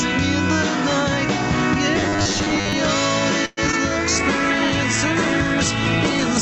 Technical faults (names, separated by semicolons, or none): gain pumping; robotic sound from repeated short buffers; call audio freeze; short concealed packet loss; call bitrate drop